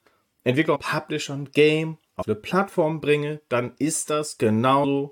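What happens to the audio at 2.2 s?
At 2.21 to 2.23 s the audio has compressed frames skipped: a few whole frames never reach the output, so the sound jumps forward by roughly a tenth of a second, about five frames of 23.2 ms.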